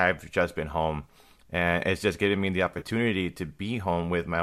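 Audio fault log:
1.04–1.09 s, AAC frame loss with concealment: about 30 ms of coded audio never reached the decoder, which fits three 10 ms frames of what is likely low-delay AAC. The decoder patched the gap from the last good spectrum, so the speech briefly turns smeared and noisy.
2.74–2.86 s, AAC frame loss with concealment: about 60 ms went missing in scattered gaps across roughly 100 ms, the longest around 30 ms. Repeated patching gives a stretch of phasey, grainy smearing.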